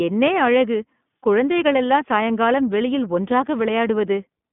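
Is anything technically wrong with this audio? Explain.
Yes. Throughout, the speech sounds thin, rough and slightly synthetic, with nothing above about 3.8 kHz. That is iLBC codec damage: each 20 ms frame is coded independently in a narrow 150 Hz to 3.5 kHz band, which fits the 15.2 kbps mode.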